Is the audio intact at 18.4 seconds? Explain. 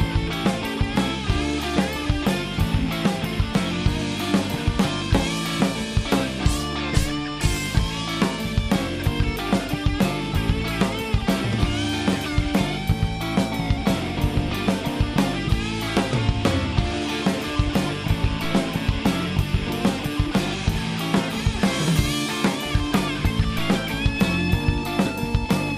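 No, a DC step hits at 18.44 s: the waveform's zero line jumps by about -23 dBFS, giving a low thump, then drifts back as a 2 Hz high-pass drains it. Unlike a dropout, the sound itself continues unbroken.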